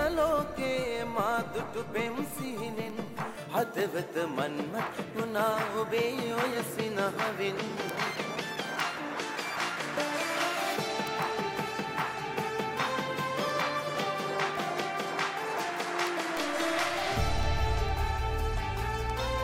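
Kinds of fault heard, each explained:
Word clock ticks: the receiving device is running on its own clock rather than locking to the digital link, so the two clocks keep slipping past each other, dropping or repeating a single sample each time. Here that gives a steady run of sharp ticks, roughly six or seven a second, from about 0.18 s right to the end, well over a hundred of them, with uneven strength. The rate points to a clock mismatch of roughly 150 ppm.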